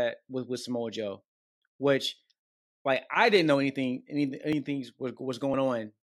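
A speech clip with three small clicks or skips, at 3.54 s (after "like I didn't"), 4.53 s (after "anything any") and 5.54 s, spaced about one second apart. This is overlap between stream segments: where roughly one-second segments overlap in time, the player trims a few milliseconds of audio, and the waveform jumps.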